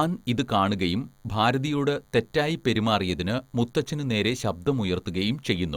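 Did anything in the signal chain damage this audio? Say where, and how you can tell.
Yes: a thin, steady 100 Hz buzz rich in harmonics sits far below the speech throughout, DECT cordless phone buzz, where analogue wiring rectifies the phone's 10 ms radio bursts.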